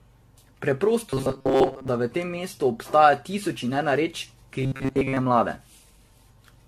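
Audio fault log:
Throughout: generation loss. The speech sounds swirly, smeared and hollow, with consonant onsets blurred and a watery texture across the whole clip, heavier than a single moderate-rate encode would leave. The likely cause is repeated lossy coding, consistent with around ten AAC-LC passes at roughly 64 kbit/s. Each pass requantises on a shifted frame grid, so noise and spectral gaps pile up rather than cancel, hollowing out the sound.
1.10–1.88 s and 4.62–5.17 s: robotic sound from repeated short buffers. In both stretches the speech collapses into a rigid, metallic buzz at 134 Hz that still roughly follows the shape of the speech. The likely cause is audio arriving too late, so playback loops the last fragment, about 7.5 ms long, which fits a buffer of that length. Much of the real audio in these spans is skipped.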